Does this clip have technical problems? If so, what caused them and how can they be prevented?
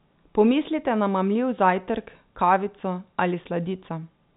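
No, this clip has no technical problems, so there is nothing to prevent.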